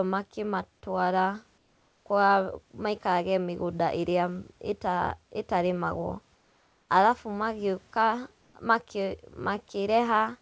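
The sender likely stopped transmitting during pauses, so the receiver filled them with comfort noise in place of the background: at 1.58–2.06 s, 6.35–6.89 s and 8.42–8.54 s the room's textured background becomes a flat, featureless noise, about 3 dB, 3 dB and 1 dB quieter.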